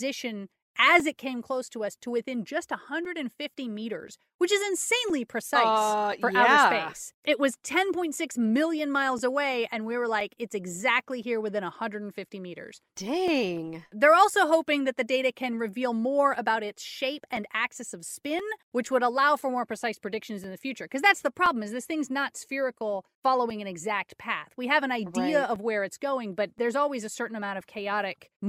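A speech recording with periodic USB or driver dropouts. From 1.0 s to 27.6 s, every 1.02 s, a background task stalls the audio path and about 4 ms is replaced by silence, so the speech carries about thirty regular ticks. The waveform shows thin flat gaps, and the spectrogram shows evenly spaced vertical broadband lines.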